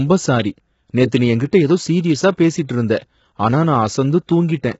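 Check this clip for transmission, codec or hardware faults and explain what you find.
There's one fault, and it runs through the whole speech clip. Low-delay AAC compression is the likely cause: the voice sounds rough and grainy, with noise filling the gaps between harmonics and nothing above 7.7 kHz. That fits AAC-ELD at around 16 kbps, where short frames can't resolve pitch cleanly and bits run thin.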